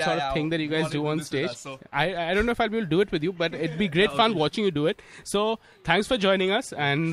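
Listening through, nothing in the audio stood out as a technical problem.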